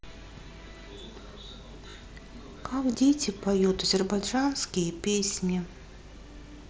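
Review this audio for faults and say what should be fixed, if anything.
Headset-to-phone packets dropped, so concealed Bluetooth headset packet loss refilled the gaps by repeating recent waveform, giving brief buzzy held tones at 1.90–1.94, 2.92–2.95 and 5.10–5.14 s. Keeping the headset closer to the phone, away from Wi-Fi congestion and obstructions, should prevent these dropouts.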